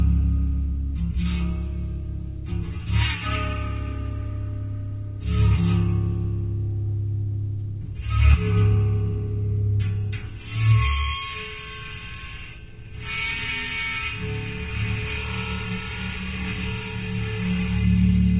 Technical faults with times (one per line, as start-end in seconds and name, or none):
none